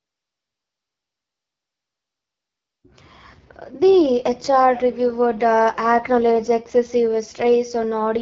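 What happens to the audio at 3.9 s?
At 3.9 s the speech carries AMR wideband (HD Voice) codec damage that runs through the whole clip: a rough, raspy texture from the coarse pulse-driven model, which fits one of the lowest rates, around 8.85 kbit/s. Unlike narrowband AMR, the band reaches about 7.3 kHz, with noise filling the band from 6.4 to 7 kHz.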